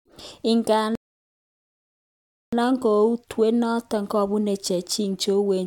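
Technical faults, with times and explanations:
0.95 to 2.53 s, playback stall: the speech drops to silence mid-flow for 1.57 s, likely because the player ran out of data or its thread was blocked until output recovered.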